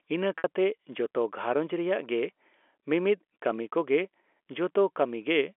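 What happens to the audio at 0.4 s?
Right around there, from 0.38 to 0.44 s, there's a packet loss with pitch repetition. About 60 ms of audio went missing, which fits roughly six 10 ms packets, and the receiver patched the hole by looping the last pitch period and fading it down. You hear the sound briefly hang on a buzzy, held tone that thins out before the audio picks back up, all through the narrow 300 Hz to 3.4 kHz telephone band.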